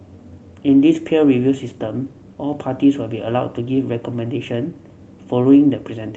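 No technical faults can be heard in this recording.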